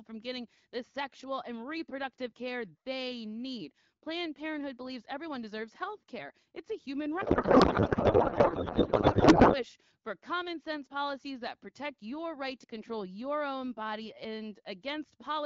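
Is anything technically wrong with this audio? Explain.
Yes. From 7.21 to 9.63 s, between "a human" and "for common sense policies", there is a codec payload misread. The receiver unpacks the AMR-WB bits in the wrong layout, which points to octet-aligned frames read as bandwidth-efficient. The decoder then turns valid-looking but scrambled fields into garbled noise and warble that barely follows the speech.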